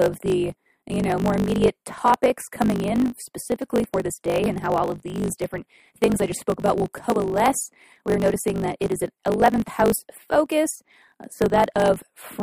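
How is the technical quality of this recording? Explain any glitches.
Poor, with a block size mismatch (truncated) throughout. Each block, which fits 1024-sample writes, loses its tail, so a 50 Hz buzz sits under the speech and it runs 1.16 times fast with its timbre intact.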